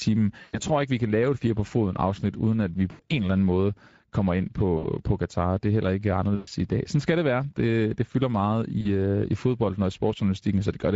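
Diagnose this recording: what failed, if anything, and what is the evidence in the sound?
Codec stage: Speex codec damage runs through the whole speech clip and is plainly audible. The voice has a hoarse, noisy grain because the CELP excitation is coded with too few bits to carry fine voicing detail. The content above 4 kHz is a shaped, noise-like fill rather than real detail. The degree of damage points to a middle-quality Speex mode, consistent with roughly 16.8 kbps.

Network stage, with concealment by the speech codec: VoIP packet loss appears as five short dropouts. In each, the speech is replaced by a stretched, buzzy or coloured-noise continuation that fades out. They fall at 0.41–0.60 s (just before "tror ikke vi kan"), 2.91–3.01 s, 4.77–4.86 s, 6.35–6.49 s (between "er heller ikke" and "i dag"), and 8.81–8.88 s (between "det fylder meget" and "øh i fodbold og"). The gaps last about 40 to 120 ms, which fits runs of two to six lost 20 ms frames. 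The decoder repeats its last pitch and filter state with falling gain, so the sound stays weak briefly after packets resume.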